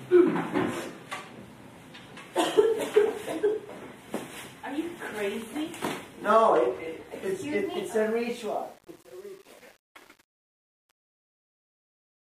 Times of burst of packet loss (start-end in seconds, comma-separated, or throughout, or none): none